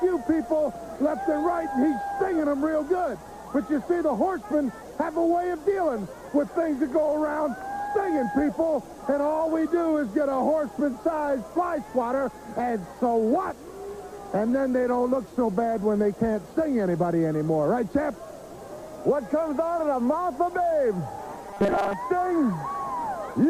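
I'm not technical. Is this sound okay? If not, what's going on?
No. From 21.47 to 21.95 s the sound turns into a stiff, metallic buzz, robotic sound from repeated short buffers. A tiny slice is likely being replayed over and over, about 5 ms, giving a fixed 200 Hz hum. Unlike a dropout, there's no silence, just buzzing.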